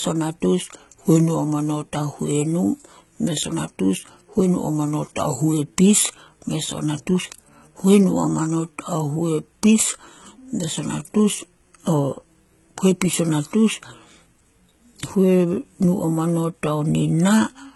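From start to finish the speech has a gritty, metallic top end, with sibilants lispy, and nothing at all above about 11.8 kHz. This points to heavy HE-AAC compression, likely at a very low bitrate of around 16 kbps. The codec keeps only the lower spectrum and synthesises the treble by copying lower bands upward under a coarse envelope, so the brightness is there but its harmonics no longer line up with the real signal.

Right after "o natus", from 0.71 to 1.85 s, the speech suddenly slows by about 6.1% and drops about 110 cents, slightly more than a semitone, then snaps back. The same detuned, slowed stretch returns from 4.58 to 5.54 s. These are drift correction steps, likely from clock-matching software that changed the playback rate in one jump to rebalance its buffer, shifting speed and pitch together until the rate returned to normal.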